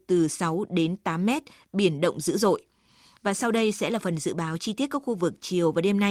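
No technical faults can be heard anywhere in the speech.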